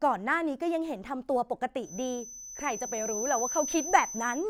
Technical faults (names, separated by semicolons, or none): feedback whistle